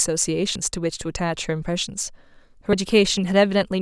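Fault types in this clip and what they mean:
Dropped buffer (overrun): the speech jumps abruptly at 0.56, 2.01 and 2.73 s, skipping roughly a tenth of a second at the first and about 40 ms at the others. This is likely audio overwritten before capture collected it, leaving a join with no gap.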